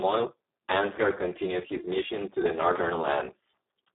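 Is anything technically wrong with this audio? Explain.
Yes. Throughout, the speech sounds hoarse, noisy and close to robotic, confined to roughly 200 Hz to 3.6 kHz with nothing above 3.8 kHz. This is heavy Speex codec damage. The starved excitation signal leaves almost a vocoder, which points to a bitrate near 4 kbps.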